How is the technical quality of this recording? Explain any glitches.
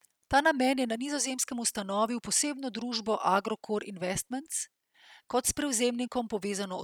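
No technical faults can be heard in the recording. There are no glitches to explain anywhere in the speech.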